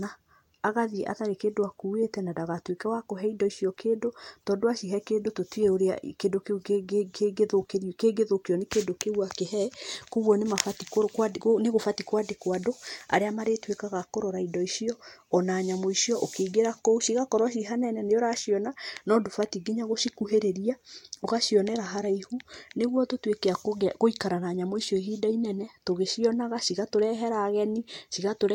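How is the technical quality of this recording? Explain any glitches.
Nothing in the recording stood out as a technical problem on listening, so there are no glitches to explain.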